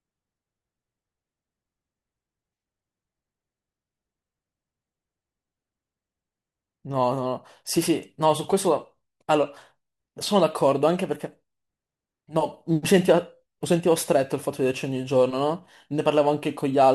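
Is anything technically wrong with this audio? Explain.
Yes. Crude rate conversion runs from 10.60 s to the end at 16.94 s: samples look repeated rather than filtered, which fits a 44.1 to 48 kHz change, leaving a gritty, inharmonic fizz about 30 dB below the speech that tracks its louder, brighter moments.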